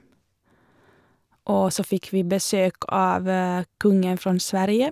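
No technical faults are audible.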